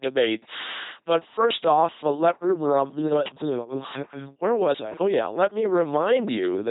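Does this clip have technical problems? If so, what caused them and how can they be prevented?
Yes. Throughout, an LPC-10 vocoder makes the speech a buzzing robotic voice that either buzzes or hisses, unlike ordinary codec smearing, with nothing above 3.9 kHz, which fits 2.4 kbit/s coding. Prevent it with a modern, higher-bitrate speech codec.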